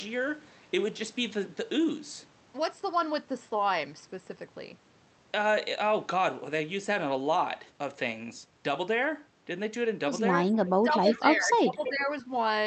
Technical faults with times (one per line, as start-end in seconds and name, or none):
10.52-10.70 echo leak
10.82-12.08 speech suppressed in double talk
11.11-11.20 echo leak
11.84-11.89 echo leak